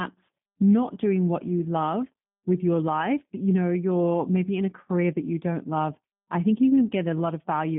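Speech carried through a G.729 codec throughout: the audio is confined to about 150 Hz to 3.5 kHz with nothing above, and the vocal-tract-and-pulse resynthesis leaves a plainly rough, synthetic texture, which fits the G.729A variant at 8 kbit/s.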